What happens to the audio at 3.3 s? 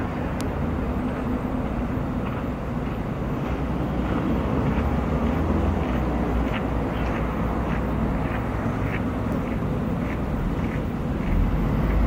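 Nothing goes wrong at 3.3 s; the audio plays through that moment intact, with no dropout, click, glitch or other fault.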